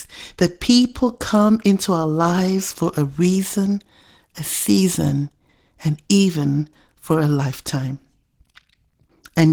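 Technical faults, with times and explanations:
Throughout, Opus voice compression: the speech has a plainly audible coded quality, slightly hoarse and mechanical, as the low bitrate forces coarse coding of the excitation signal. The sound points to hybrid operation, with a linear-prediction coder handling the band below 8 kHz and a transform layer covering the top, so content extends to about 20.2 kHz yet still sounds hoarse. This fits a rate near 16 kbps in 20 ms frames.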